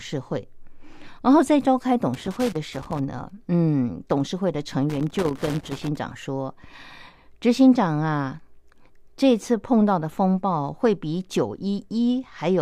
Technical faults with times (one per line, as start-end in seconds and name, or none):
2.14-2.99 loose connector crackle
4.90-5.96 loose connector crackle